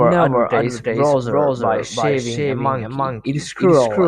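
Speech with a doubled audio track throughout: an equally loud, full-band copy trails the original by about a third of a second, likely from a second, slower capture path. Unlike room echo, the repeat has no decay or room colour.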